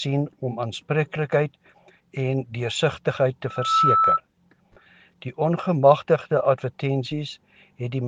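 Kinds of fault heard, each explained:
Loudspeaker feedback squeal: the microphone re-amplifies its own loudspeaker until the loop runs away at 1.3 kHz, swelling in about a third of a second into a squeal above the sound.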